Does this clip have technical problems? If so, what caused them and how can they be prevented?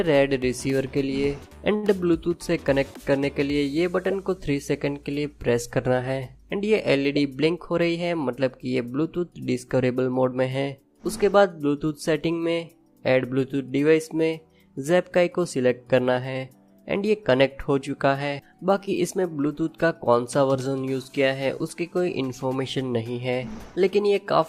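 Yes. From 1.75 to 1.85 s the sound is held too long, with nothing lost. This is a short stall from a late packet. The jitter buffer ran dry, so the receiver stretched the last sound for 76 ms until the packet arrived, then resumed from the same point, adding 76 ms of delay. A modestly deeper or adaptive jitter buffer on a steadier network path would absorb this kind of late arrival.

From 7.41 to 8.10 s the sound runs hurried at 110% speed while keeping its pitch. This is a jitter buffer speed-up. The receiver had built up excess delay and cut it by repeatedly removing short pitch-period slices, about 70 ms in total. Spreading that catch-up more gently over a longer stretch, and reducing the network jitter that causes delayed packets to arrive together, would prevent the audible rush.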